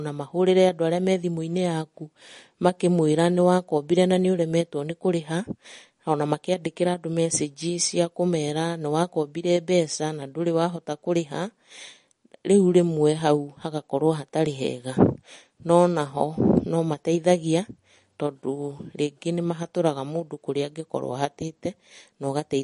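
From start to finish the speech has likely been squeezed through MP3 compression at a low bitrate, one that fits roughly 40 kbps. Short of bits, the encoder cuts the treble off sharply, leaving nothing above 10.6 kHz, and it drops weak frequency detail that then flickers in and out from frame to frame. The damage is plainly audible: s sounds turn dull and chirpy, the tone has a watery, swirling quality, and consonant onsets are softened and smeared.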